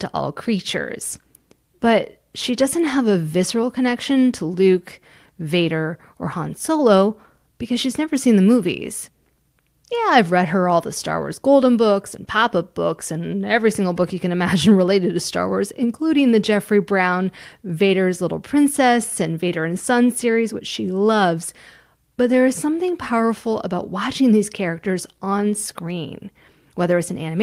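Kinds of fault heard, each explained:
No faults can be heard.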